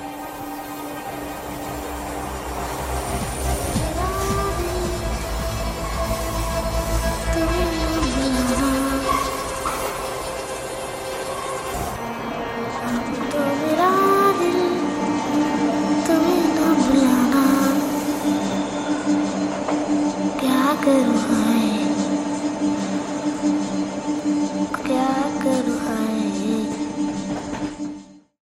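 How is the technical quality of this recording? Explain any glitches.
No glitches or technical faults are audible anywhere in the recording.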